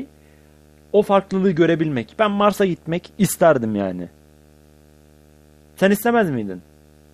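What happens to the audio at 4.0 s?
At 4.0 s the speech carries video or display buzz, present throughout. A screen or video cable couples in a 75 Hz field-rate buzz with hash, well below the speech.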